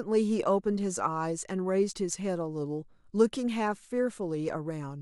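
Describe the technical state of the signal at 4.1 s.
At 4.1 s the speech signal is intact, with no technical fault present at that moment.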